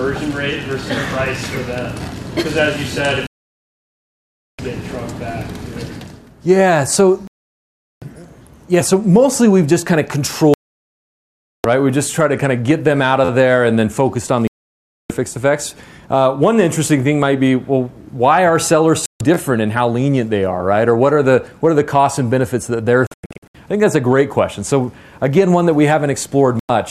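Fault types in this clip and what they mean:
digital broadcast dropout: The receiver lost the signal or rejected corrupted frames and muted until clean data returned, so the sound cuts to silence seven times, from about 0.1 s at 26.59 s up to 1.3 s at 3.27 s, with 23.07 s breaking into several short holes.
repeated buffer: Fresh audio arrived late, so the player replayed its last small block, which fits a 512-sample buffer of about 12 ms. Each repeat gives a brief buzzy stutter with hard joins, heard at 5.32 s, 13.25 s and 19.34 s.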